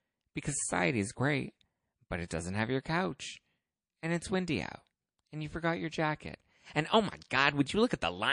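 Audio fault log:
Throughout: MP3 compression. The speech sounds watery and swirly, with metallic chirps on s sounds and smeared consonant onsets, damage that is plainly audible and fits a low bitrate around 40 kbps. The likely cause is an encoder short of bits cutting the treble at a fixed frequency and dropping weak frequency lines that flicker on and off between frames. A spectrogram shows a hard ceiling on the high band and patchy, blinking holes below it.
2.28 to 2.31 s: pre-echo. A short hiss rises about 14 dB above the quiet background for 26 ms before a sharp attack, which then sounds soft and blurred. The noise allowed for the loud onset has spread back across a long transform block of roughly 52 ms, since the encoder never switched to short blocks. On a waveform a fuzzy low-level smear leads the transient, and a spectrogram shows a broadband haze just ahead of it.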